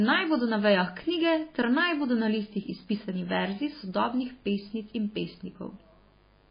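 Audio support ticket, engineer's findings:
Mains buzz, throughout: steady raspy 50 Hz buzz about 35 dB below speech. Switching-spike harmonics reach kilohertz, unlike a pure-tone hum. Likely a dimmer, rectifier or unshielded lead.

Heavy MP3 compression, throughout: watery, swirly speech, smeared attacks, nothing above 5 kHz. Flickering bands distinguish it from a plain low-pass. Likely cause is a very low bitrate, around 17 kbps.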